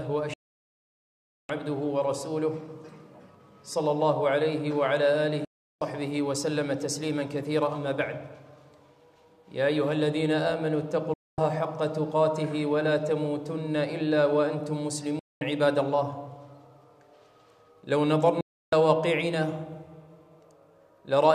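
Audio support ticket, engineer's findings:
Audio cuts abruptly to silence with a very short fade of about 3 ms, five times: 0.34–1.50 s, 5.45–5.81 s, 11.14–11.38 s, 15.19–15.42 s, 18.41–18.73 s. Gaps run from 0.22 s to 1.15 s and resume mid-programme, with no catch-up. Digital broadcast dropout at the receiver/decoder. Corrupt or missing frames fail the checksum, so the decoder mutes until valid frames return. Gap lengths fit roughly 24 ms frames. The content sent during each mute is lost.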